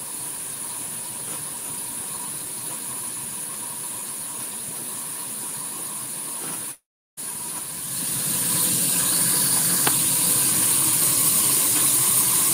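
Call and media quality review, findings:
Long network dropout, 6.71–7.19 s: audio likely lost in transit; receiver concealment continues last sound as fading buzz or hiss, then about 0.36 s silence, resuming with roughly half a second missing.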